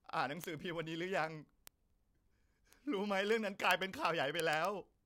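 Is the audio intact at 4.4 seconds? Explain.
No, 4.4 s sits right inside a run of word clock ticks that goes from about 0.12 s to 5.04 s. The receiving device is clearly running on its own clock, drifting from the sender's by something like a tenth of a percent. Every time the two clocks slip past each other, a single sample gets dropped or doubled. You hear that as a steady stream of sharp ticks roughly every 20 ms, about fifty a second, riding on top of the speech.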